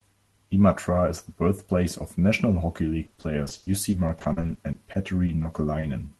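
From 3.03 s to 5.85 s, the speech turns choppy and robotic. This is repeated packet loss. Audio packets keep going missing or arriving late. Each hole is covered by stretching the last sound forward. Then another hole arrives soon after. There are around two dozen short gaps, the longest about 40 ms. Roughly a fifth of this stretch is patched sound. The repeated patching leaves fragments missing.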